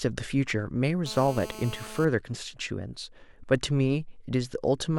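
GSM phone buzz runs from 1.06 to 2.05 s: a nearby 2G phone transmitting about 217 bursts per second during a call gets rectified by the audio circuit. The result is a steady, raspy 217 Hz buzz, about 15 dB below the speech.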